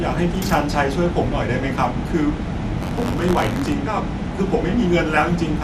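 A speech recording that sounds dull and granular throughout, with nothing above 14.4 kHz, likely MP2 compression at a low rate near 80 kbps. From 2.77 to 3.73 s, buffer tearing adds a robotic 93.8 Hz buzz, consistent with a 512-sample buffer, where a small fraction of each period repeats audio from roughly 40 ms earlier.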